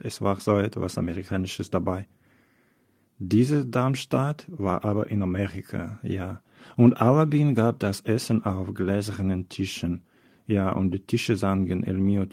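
Nothing in this speech recording stands out as a technical fault at any point, so there's nothing here to flag.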